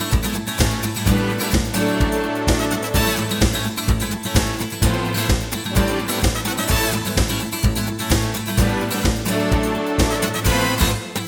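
No technical faults are audible anywhere in the audio.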